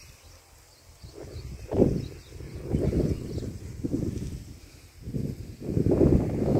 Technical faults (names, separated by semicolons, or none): channel delay (doubling)